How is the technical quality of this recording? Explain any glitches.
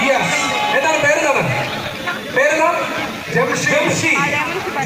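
The quality is rough, with grainy distortion from start to finish. It sounds like low bit depth without dither: likely 6-bit rounding, so the error tracks the sound at roughly 30 dB below it, turning quiet stretches gritty.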